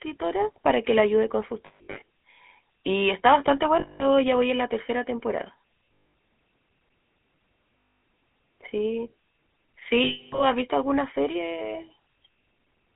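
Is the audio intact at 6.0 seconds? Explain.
No. From 5.94 to 6.03 s there are lost GSM frames. When a frame arrives corrupted, the decoder reuses the last good frame's vocal-tract settings, so the sound hangs as a rough, metallic ring instead of dropping out. About 180 ms is lost, scattered across roughly 200 ms, with the longest unbroken gap around a tenth of a second. That held, metallic ring is what separates this from a plain dropout, which would leave a gap of silence or a click rather than a held tone. It sits on top of the GSM full-rate codec's buzzy, gravelly roughness and 250 to 3600 Hz line band, present across the whole clip.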